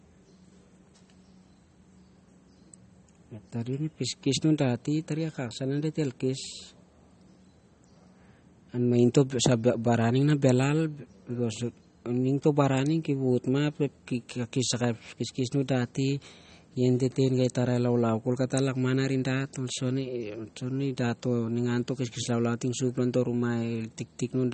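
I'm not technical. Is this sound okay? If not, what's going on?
No, the speech sounds watery and a bit swirly all the way through, with nothing above 8.4 kHz, so it's dull up top. Likely heavy MP3 compression squeezing out detail.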